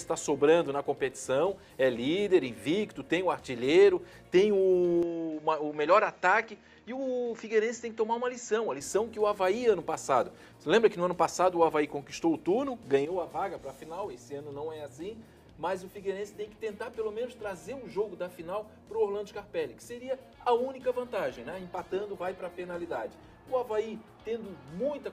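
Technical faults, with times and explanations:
5.03–8.81 s, input switched to a poorer device: the sound abruptly turns duller, with nothing above 7.6 kHz, a little quieter, and carrying faint new background noise, with no gap at either edge. The likely cause is the input moving to a narrower-band microphone and then back.
21.34–23.34 s, adaptive stream at a lower bitrate: for two seconds the sound carries more codec artefacts, then snaps back without a gap. This fits the stream briefly dropping from roughly 64 to 16 kbit/s Opus as the connection slowed.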